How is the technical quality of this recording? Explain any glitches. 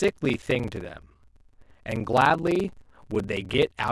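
The quality is poor. A block size mismatch (padded) runs through the whole speech clip. Each block arrives short and its remainder is filled with silence, which fits a 1024-sample read. That gap repeats as a buzz at 23.4 Hz. The speech plays at 0.861 times normal speed, with pitch roughly unchanged.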